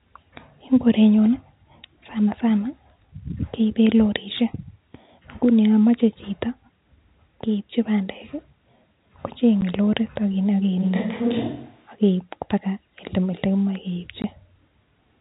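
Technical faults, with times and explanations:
9.61 s and 14.22 to 14.24 s: packet loss filled with silence. The sound drops out completely for about 10 ms at 9.61 s and for 20 ms at 14.22 s, the second gap twice the first, which fits one and then two lost 10 ms packets. Each hole is silence with abrupt edges, unlike a fade or a concealment that smears or repeats the sound across the missing stretch.
10.84 to 11.90 s: switch to a distant microphone. For about a second the speech turns roomy and hollow, losing low-end body, and a room noise floor rises to roughly 35 dB below the speech, while loudness stays about the same. The change in and back out is sudden rather than gradual. That points to the close microphone's signal briefly dropping away, likely leaving only a farther pickup, and not to an equaliser or filter change, which would not add room character.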